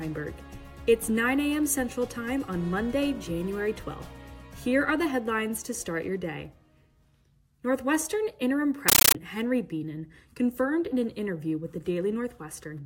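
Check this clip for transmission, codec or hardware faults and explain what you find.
One fault is present. From 8.89 to 9.15 s, a compressed stream is played as audio. Undecoded Dolby Digital frames arrive as samples, giving loud static chattering at 31.25 Hz.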